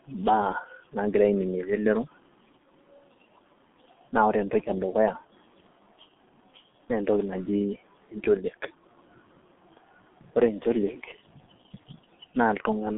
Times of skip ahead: none

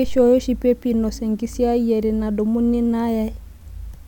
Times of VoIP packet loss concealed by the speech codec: none

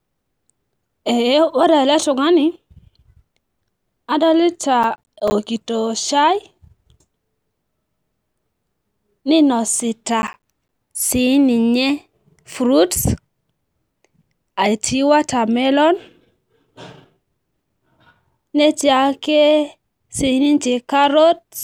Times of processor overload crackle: 4.83-5.32, 10.22-10.69

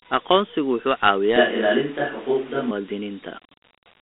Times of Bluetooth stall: none

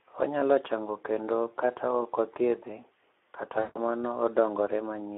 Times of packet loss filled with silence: none

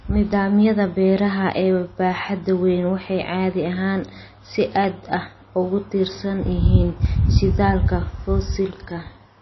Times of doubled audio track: none

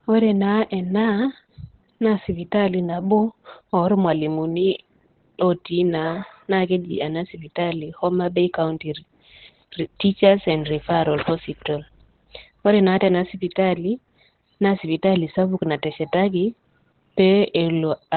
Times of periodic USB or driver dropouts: none

